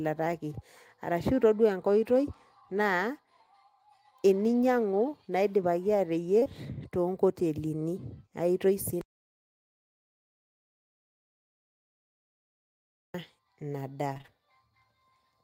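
Just after "teninyiangu naiipaki", at 6.39 s and again at 6.44 s, there are two back-to-back instances of short concealed packet loss. Each is about 20 ms of audio that never reached the decoder in time, and the receiver bridged each hole by extending the preceding sound before blending back. It comes across as a brief smear or wobble. On a spectrogram the fill looks unnaturally smooth across roughly 6.39 to 6.47 s, and the waveform shows a slight seam at each rejoin.

From 14.13 to 14.30 s the sound turns choppy: repeated packet loss. Over that span of about 160 ms, a handful of gaps arrive in quick succession, the longest about 25 ms. Each is patched by continuing the last sound, and the next hole follows before the audio settles, so roughly half the stretch is synthesised rather than real. A spectrogram would show a striped, stuttering texture of repeated frames, and the waveform would show a series of small discontinuities.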